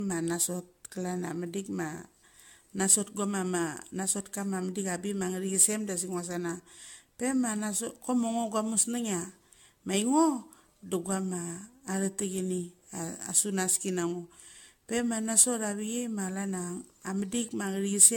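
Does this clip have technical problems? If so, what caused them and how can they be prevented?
Yes. Throughout, the speech sounds swirly, hollow and smeared, with blurred attacks and nothing above 17 kHz. This is likely generation loss from about seven AAC-LC re-encodes at 96 kbit/s. To prevent it, keep a lossless master and encode to AAC only once, at the final delivery step.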